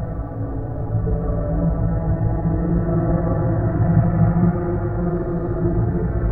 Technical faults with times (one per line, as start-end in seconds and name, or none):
none